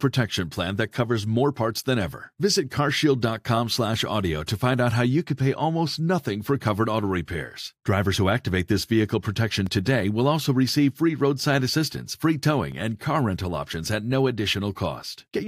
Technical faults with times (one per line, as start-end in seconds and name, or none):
9.66-14.76 periodic USB or driver dropouts